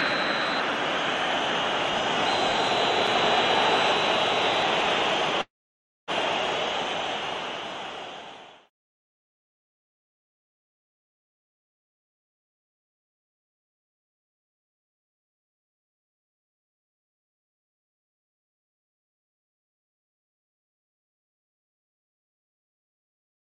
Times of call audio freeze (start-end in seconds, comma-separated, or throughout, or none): 5.41-6.11